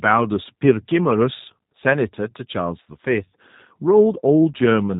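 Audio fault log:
Throughout, G.729 codec: the speech sounds plainly rough and slightly synthetic, with a narrow, boxy tone that has nothing above 4 kHz. The codec does not store the waveform itself. It models the vocal tract with a filter, predicts the pitch, and approximates the rest with a few pulses in each half of a 10 ms frame, which fits an 8 kbit/s G.729A stream. The missing detail and the modelling errors come through as that coarse, artificial edge.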